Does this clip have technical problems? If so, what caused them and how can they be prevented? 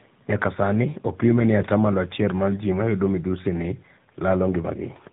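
Yes, tandem speech coding throughout: rough, muffled, warbly speech with nothing above 3.8 kHz, like a GSM-style coder feeding an AMR-style one. Keeping a single codec end to end, or using transcoder-free operation, prevents it.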